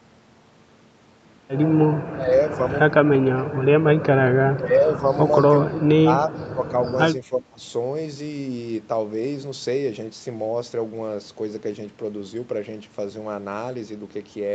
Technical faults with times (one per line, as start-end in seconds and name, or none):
2.08-2.61 speech suppressed in double talk
4.53-5.08 speech suppressed in double talk
5.70-6.73 speech suppressed in double talk
7.23-7.62 speech suppressed in double talk